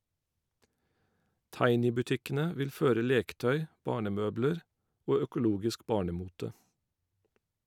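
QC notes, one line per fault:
Nothing stood out on listening to this speech clip.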